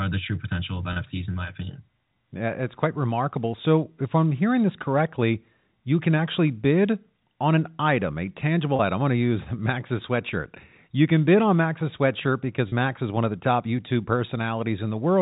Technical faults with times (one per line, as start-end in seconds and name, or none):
0.93-0.96 packet loss with pitch repetition
8.76-8.79 packet loss with pitch repetition
12.69-12.72 packet loss with pitch repetition